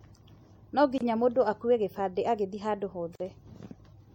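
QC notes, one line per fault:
Throughout: MP3 compression. The sound turns watery, with swirling on the s sounds. This is likely MP3 encoding at a low bitrate, consistent with about 64 kbps. Starved of bits, the encoder drops weak frequency lines frame by frame.
0.98–1.01 s and 3.15–3.20 s: gap at a join of encoded pieces. Short silences of 26 ms and 46 ms cut into continuous speech. The first falls just before "mũndũ akue gĩbandĩ agĩthiĩ" and the second just after "akue gĩbandĩ agĩthiĩ handũ". Separately encoded pieces were butted together, so each keeps its start-up delay and end padding. The edges are smeared by the codec, and the sound resumes where it stopped.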